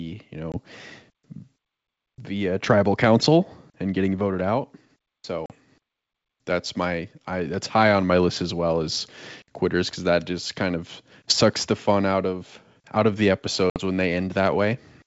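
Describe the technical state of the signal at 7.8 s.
At 7.8 s the speech is intact, carried over G.722 wideband telephone coding at 64 kbit/s with a band limit near 7 kHz.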